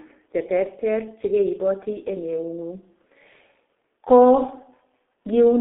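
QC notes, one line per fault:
Throughout: G.723.1 codec. The speech sounds muffled and hoarse, with consonants smeared together. Nothing comes through below about 250 Hz or above about 3.5 kHz, so the sound is thin and dull. The coder sends roughly 6.3 kbit/s and works in 30 ms frames. It models the voice coarsely and updates that model slowly. Quick changes in the sound get averaged away. The damage is heavy, so the rasp and blur persist across the whole clip.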